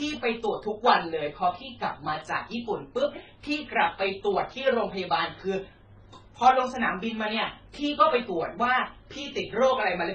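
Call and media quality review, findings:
Transcoding between lossy codecs, whole clip: speech band stops at 10 kHz, with MP3 artefacts plus HE-AAC's own heard together. Likely an MP3 near 17 kbit/s re-encoded to HE-AAC around 16 kbit/s. Two distinct artefact types layered, unlike a single low-bitrate encode.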